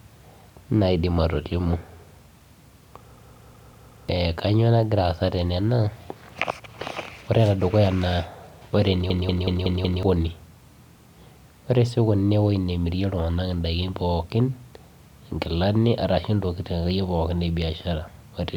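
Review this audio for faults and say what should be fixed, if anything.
A system hang loop at 3.16–4.09 s and 9.10–10.03 s repeats one 186 ms slice of speech five times, a 5.4 Hz machine-gun stutter that fits an 8192-sample ring buffer replaying while the driver stalled. Roughly a second of speech is lost each time. The waveform and spectrogram show identical blocks tiled every 186 ms. To prevent it, find and fix the stall in the audio driver or host, for example by keeping the audio thread free of blocking work.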